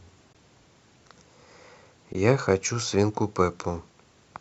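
Lost AAC frames, zeroed by the decoder, cause two brief dropouts in this speech clip, heard as AAC frame loss with muting at 0.33 s and from 2.13 to 2.15 s. Each gap spans roughly 20 ms and fades out and back in over about a frame, fitting a couple of short frames, so the holes sound soft-edged. The likely carrier is low-delay AAC compression, which leaves only light coding roughness.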